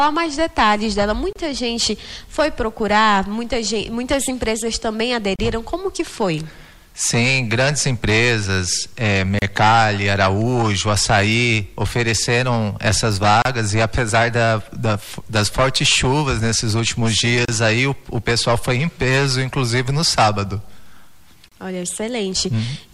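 Short dropouts of silence cut into the continuous sound at 1.33, 5.36, 9.39, 13.42, 17.45 and 21.48 s, regularly every 4 s, each lasting about 29 to 32 ms, with their edges smeared. The sound resumes exactly where it broke off. This is a gap at a join of encoded pieces: segments encoded separately were spliced without trimming, so each join keeps the encoder's start-up delay and final-frame padding as silence.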